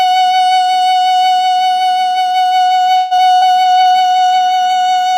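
At 2.97 s the music stalls for about 135 ms, until 3.13 s. The last sound carries on as a fading buzz or hiss that fills the hole, and then the music resumes exactly where it stopped. Nothing is lost, but everything after arrives 135 ms later. This is a call audio freeze. The likely cause is packets held up in transit, so the jitter buffer ran dry and the receiver had to stretch what it had.

Between 3.17 and 3.29 s there is a short concealed packet loss. About 20 ms of the music never reached the decoder in time. The receiver patched it with roughly a hundredth of a second of synthesized sound continued from the previous audio, then blended back into the real signal. It comes across as a brief smear or small wobble rather than a clean gap.

From 3.35 to 3.43 s a burst of packet loss follows. About 60 ms of audio is gone, and 67 ms of concealment covers it. The receiver extends the last sound and lowers it as the gap goes on, so it becomes a held, dimming buzz or hiss. 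The music then picks up further along, with the section in between missing.

At 3.62 s a call bitrate drop sets in and lasts to the end, about 1.56 s. The encoder falls from 64 kbps to 28 kbps after the bandwidth estimate shrank. With far fewer bits, the coding gets coarser. The music turns rougher and more watery. It does not recover before the clip ends.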